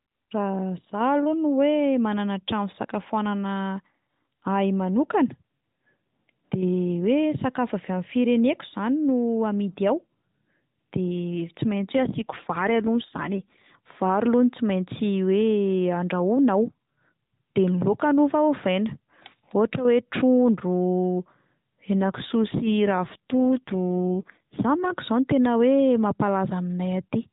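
From 11.74 to 13.75 s, and again from 21.97 to 24.92 s, the speech goes rougher and more synthetic: an AMR rate drop, where a weak radio link pushes the codec down from the 12.2 kbps mode to one that fits about 5.9 kbps, spending bits on error protection. Unlike packet loss there is no gap, and unlike a bandwidth switch the band stays fixed below 4 kHz. Only the buzzy texture changes, clearing when the rate climbs back.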